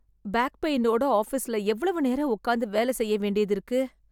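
Nothing goes wrong anywhere in this bit of speech, so there are no faults to walk through.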